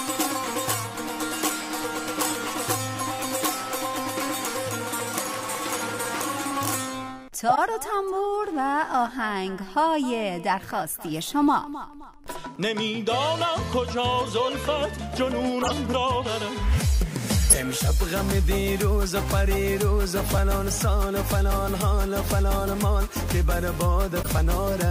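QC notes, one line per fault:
Throughout: Wi-Fi interference. A steady ticking at roughly ten per second, matching a 102.4 ms beacon interval, sits well below the programme, on the order of 35 dB down. A nearby Wi-Fi radio's periodic beacon transmissions are being picked up by the audio circuitry and rectified into the signal path. Each beacon produces a brief click, and the regular spacing gives the interference its clock-like character.
1.77–1.80 s, 7.49–7.58 s, 15.61–15.73 s, 17.50–17.55 s, 20.31–20.35 s, 24.22–24.27 s: corrupt frame decoded. Six short glitches of energy land at frequencies unrelated to the surrounding audio. Damaged compressed frames were decoded and played rather than concealed, so wrong gains and misread spectral codes produced spurious content. The 1.77 s event is a single frame and comparatively quiet. The runs at 7.49 s and 15.61 s span several frames and are loud, peaking around -10 dBFS. 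The remaining three cover a couple of frames each.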